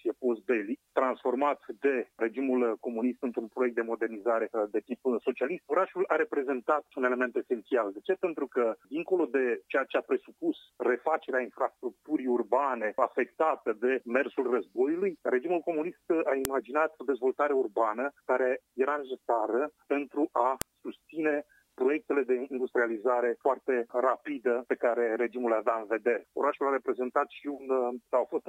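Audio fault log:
16.45 s and 20.62 s: file header played as audio. A sharp, loud click sounds at each point. A new joined piece begins there with its header still attached. Those header bytes play as samples, so they snap out whatever the surrounding sound is doing.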